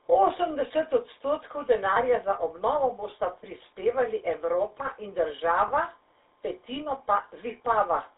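Throughout, the speech has a buzzy, gravelly roughness and a narrow telephone band of roughly 300 Hz to 3.7 kHz, with plainly audible codec damage. This is the GSM full-rate codec, which models the vocal tract and excites it with sparse, regularly spaced pulses, consistent with a 13 kbps stream.

From 1.94 to 1.97 s, just before "za obnovo bosta", and again from 5.68 to 5.71 s, the sound briefly holds as a rough, metallic ring. These are lost GSM frames, each about 20 ms, where the decoder repeated the last good frame's settings.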